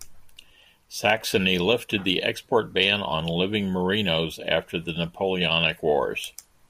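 No technical faults can be heard anywhere in the speech.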